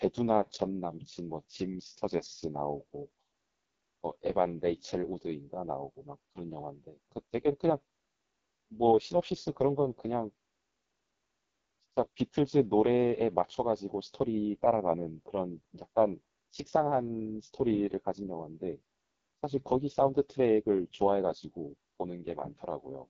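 Throughout, the speech carries heavy AMR wideband (HD Voice) codec damage. It sounds rough and raspy, fitting the lowest 6.6 kbit/s mode. Nothing exists above 7.7 kHz.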